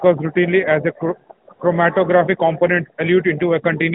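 At 1.46 s and from 1.54 to 1.60 s, just before "chromatographic components", AMR comfort noise appears. The sender judged the sound silent and paused speech frames, and smooth synthetic hiss filled the gaps. Unlike a dropout, these gaps aren't silent: the background switches to steadier noise.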